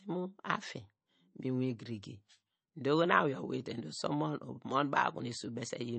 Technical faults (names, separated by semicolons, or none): MP3 compression